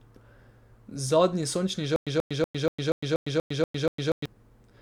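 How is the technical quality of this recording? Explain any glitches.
The recording has one fault, a stutter with silent gaps, which breaks up the speech from 1.96 s to 4.26 s. The same 134 ms fragment plays nine times, each followed by about 105 ms of dead silence, repeating every 240 ms. The likely cause is a stalled stream or player replaying its last buffer at each retry. The audio that should have played during the stall is lost. On a waveform it appears as identical blocks separated by flat-line gaps. On a spectrogram it shows as repeated matching stripes between empty columns.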